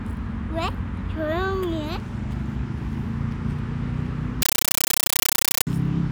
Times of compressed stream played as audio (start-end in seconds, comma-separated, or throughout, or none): 4.42-5.67